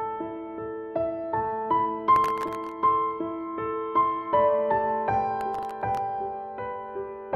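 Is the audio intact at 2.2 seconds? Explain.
No, from 2.16 to 2.72 s there's processor overload crackle: around twenty sub-millisecond buffers miss their deadlines and replay stale audio, giving a gritty, tearing burst.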